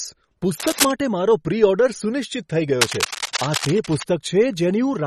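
A speech recording with a watery, swirly quality throughout, where weak high-frequency detail flickers in and out and nothing is present above 12.6 kHz. The MP3 compression damage is plainly audible and is likely the result of encoding at a low bitrate, which fits something near 36 kbps. Bursts of rustling, scratchy noise sit over the sound from 0.60 to 0.91 s, about as loud as the speech and ending just before "મારો પ્રી", and again from 2.80 to 4.03 s, somewhat below the speech. This cable scratch noise likely comes from a worn cable, connector or control carrying a DC voltage being moved, so that its contact resistance jumps about rapidly.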